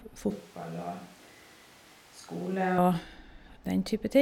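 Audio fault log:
0.31–2.78 s, switch to a distant microphone: the speech abruptly turns roomy and hollow, thinner in the bass and about 10 dB quieter, with room noise rising to roughly 25 dB below the speech, then snaps back to the close sound. This is likely the close microphone dropping out and a far one taking over. The waveform shows a sudden step down in amplitude, and the spectrogram shows weaker low frequencies, smeared reverberant tails and a lifted noise floor between the gaps.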